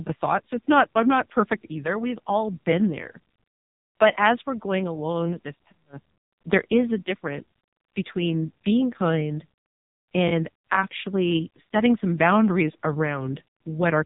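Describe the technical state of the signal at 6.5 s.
At 6.5 s the speech carries AMR narrowband mobile codec damage, as it does across the whole clip. Nothing above about 3.8 kHz survives, so the voice sounds boxed-in and telephone-thin. The codec rebuilds speech from a vocal-tract filter fed by a few sparse pulses per short subframe. Here the damage is heavy. The tone turns buzzy and synthetic, which points to one of the lowest bitrates, roughly 6 kbps.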